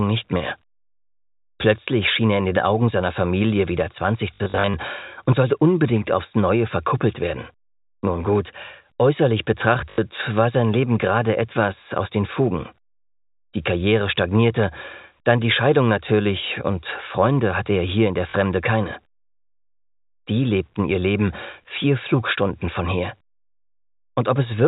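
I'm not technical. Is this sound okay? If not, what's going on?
No. There is packet loss with the last packet repeated: brief robotic stutters at 4.34–4.74 s, 9.9–9.98 s and 18.3–18.34 s, and a small blip at 16.48–16.5 s, where chunks of sound dropped out and were replaced by a repeat of the previous one.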